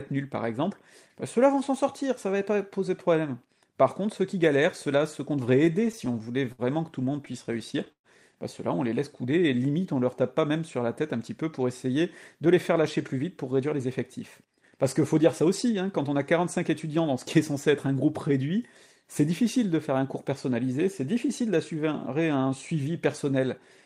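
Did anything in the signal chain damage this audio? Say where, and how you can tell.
Yes. Repeated stalls (stutter) at 5.65–6.62 s and 7.13–8.07 s: late network packets emptied the jitter buffer, so the receiver stretched the last sound through gaps up to 121 ms.

Jitter buffer slow-down at 9.26–10.49 s: the receiver repeated pitch periods, adding 122 ms, so the audio plays at 91% speed with unchanged pitch.

Jitter buffer speed-up at 12.35–13.86 s (106%) and 14.41–16.33 s (108%): an overfull buffer dropped short pitch-period pieces, about 100 and 150 ms, hurrying the audio.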